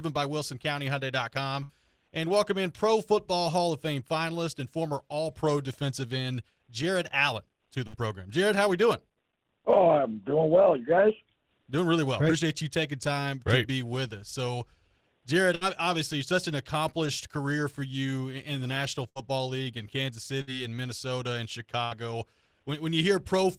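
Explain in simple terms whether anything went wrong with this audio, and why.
Six brief smears break the sound, at 1.63, 7.87, 15.55, 19.09, 20.41 and 21.85 s, each lasting under a fifth of a second. This is a burst of packet loss: data arrived too late or not at all, so the player stretched and faded the last sound for about 60 ms, then jumped ahead, skipping about 60 ms of audio.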